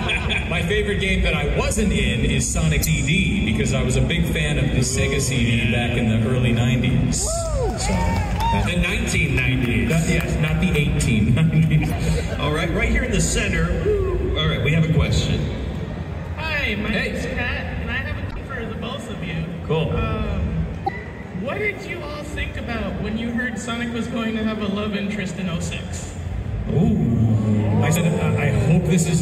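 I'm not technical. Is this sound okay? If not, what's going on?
No. Five short blips at 2.81, 11.88, 18.28, 20.84 and 27.92 seconds come from damaged data in a compressed stream. Some stored bits were broken, so the player briefly garbled the sound.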